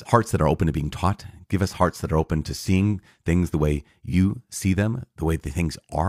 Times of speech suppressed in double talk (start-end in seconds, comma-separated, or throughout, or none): none